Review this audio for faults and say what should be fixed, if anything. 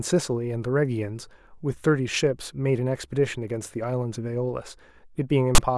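At 5.55 to 5.58 s, near the end of the speech, a 32 ms burst of loud, hard-edged rasp cuts in. This is file tags played as audio: a block of text metadata was decoded as sample data, and the character bytes produce a harsh buzz offset to one side. To prevent it, make the reader parse the container so it skips tag chunks and decodes only the declared audio data region.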